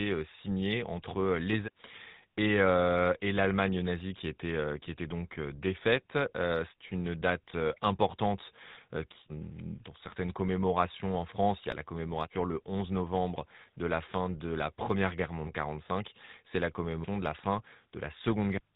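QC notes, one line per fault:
Throughout: GSM full-rate codec, consistent with 13 kbps coding; the pulse-driven vocal-tract model and 4 kHz ceiling leave the speech dull, buzzy and gravelly.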